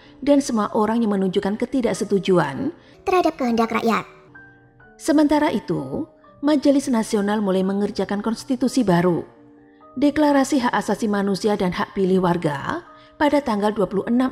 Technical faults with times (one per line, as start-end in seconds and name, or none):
2.94-4.28 section at the wrong speed